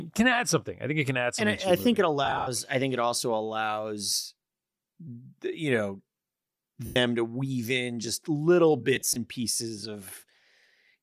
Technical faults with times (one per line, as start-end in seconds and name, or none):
2.25-2.48 lost LE Audio frames
6.86-6.96 lost LE Audio frames
8.96-9.17 lost LE Audio frames